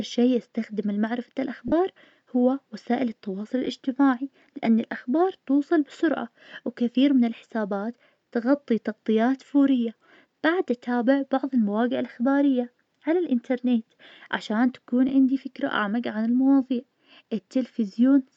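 Lost LE Audio frames occur at 1.68 to 1.72 s after "شي استخدمه لمعرفة", a 40 ms gap consistent with four 10 ms frames, then at 3.65 s after "هو وسائل التواصل" and 15.09 s before "عندي فكرة أعمق عن". Each time the LC3 decoder repeats the last spectrum with scrambled signs, so the speech briefly smears into noise.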